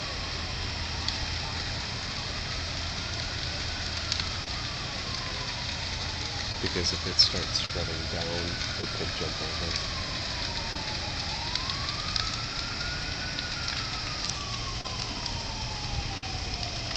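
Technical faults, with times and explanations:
4.44, 6.52, 7.66, 8.81, 10.73 and 14.81 s: short concealed packet loss. Gaps of 14 to 35 ms were patched by extending the preceding sound. Each leaves a brief smear.
16.17 to 16.23 s: burst of packet loss. The receiver stretched the last sound over 51 ms, turning it down. Then it resumed 50 ms further on.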